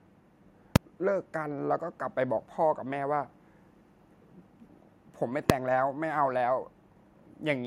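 Two sharp, very loud bangs cut through the speech, at 0.76 s and 5.50 s. These are invalid numbers at full scale: a calculation produced infinite or invalid values that were pinned to maximum level for blocks lasting about 2.7 ms and 1.3 ms, which fits 128-sample and 64-sample blocks.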